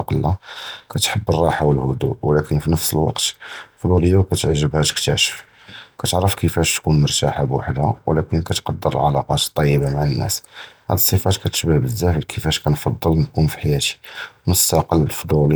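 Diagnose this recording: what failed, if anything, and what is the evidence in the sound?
Nothing in the speech stood out as a fault on listening, so no failed stage can be pointed to in the sound.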